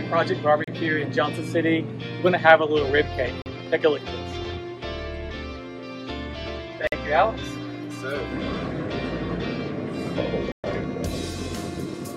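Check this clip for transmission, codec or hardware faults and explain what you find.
Four Bluetooth stalls cut the sound out. They come at 0.64, 3.42, 6.87 and 10.52 s, lasting 33, 41, 50 and 121 ms. Each is a clean silence, then playback resumes. Likely the headphone buffer emptied while interfered packets were resent.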